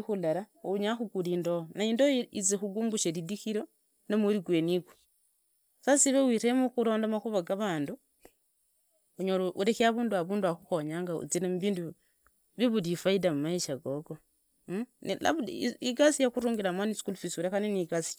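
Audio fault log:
No fault is heard in this speech clip.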